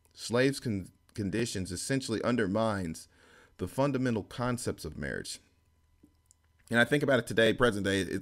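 Overlapping chunks in this speech clip, at 1.40–1.42 s before "essentially undermines the fundamental", 3.42–3.44 s before "the fundamental concepts of", 5.44–5.46 s after "fundamental concepts of marriage", and 7.46–7.49 s: each 2-second chunk restarts 23 ms early, replaying that sliver as a regular stutter.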